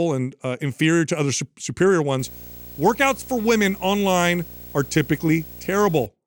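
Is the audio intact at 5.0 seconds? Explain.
No. At 5.0 s a video or display buzz sits under the speech, a 59.94 Hz field-rate buzz with hash and a thin 15.7 kHz line-rate whine, around 20 dB below the voice. It runs from 2.19 to 6.06 s, starting after "to other su superior", where a screen or video cable couples into the audio.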